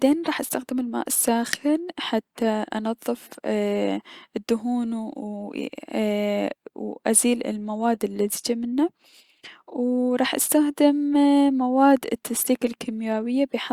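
No technical faults are audible.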